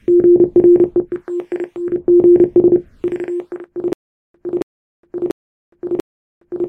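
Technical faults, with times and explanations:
3.93 s to the end: stutter with silent gaps. The same 277 ms burst plays four times, each followed by about 414 ms of digital silence, so it repeats every 690 ms. The likely cause is a stalled stream replaying its last buffered fragment on each retry, and the intervening audio is lost.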